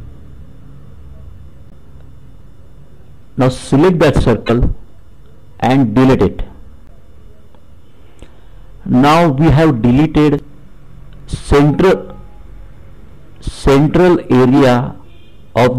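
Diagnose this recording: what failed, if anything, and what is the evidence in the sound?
Four brief glitches, each about 40 ms long, break into the sound at 1.69 to 1.73 s, 4.46 to 4.50 s, 6.86 to 6.90 s and 10.36 to 10.40 s. They place the failure at the codec stage: damaged data in a compressed stream. Corrupted bytes made the decoder misread or reject those frames and lose sync until it found the next valid frame header.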